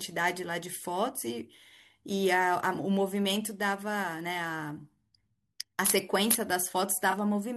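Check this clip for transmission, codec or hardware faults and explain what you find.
One fault turns up near the end of the speech. From 7.11 to 7.14 s there is a corrupt frame concealed. The decoder detected damaged AAC data and covered it. Its length fits a single frame.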